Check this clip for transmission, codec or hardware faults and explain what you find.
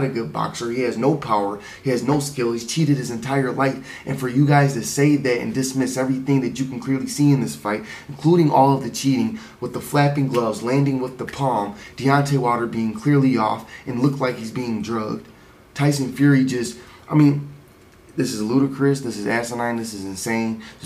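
Nothing here points to a transmission, codec or hardware problem; the audio holds steady all the way along with nothing that stands out.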